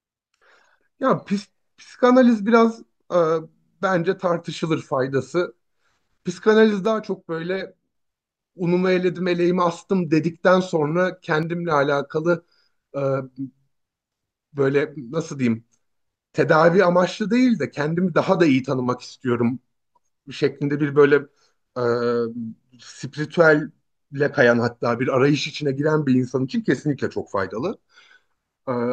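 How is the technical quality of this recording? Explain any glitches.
The speech has two brief level drops. From 6.85 to 7.95 s and again from 11.43 to 11.71 s, the sound abruptly falls by about 6 dB and then snaps back. This is likely one channel dropping out: with one stereo side gone, the mono sum keeps only half of what both channels shared. The sharp edges and the fixed 6 dB step set it apart from a gain ride or a full dropout to silence.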